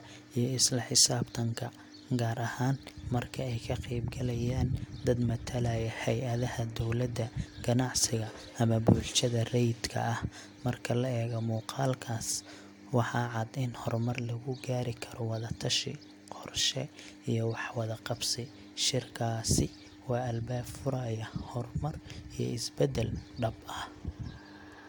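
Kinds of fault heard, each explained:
No kinds of fault are heard in this clip.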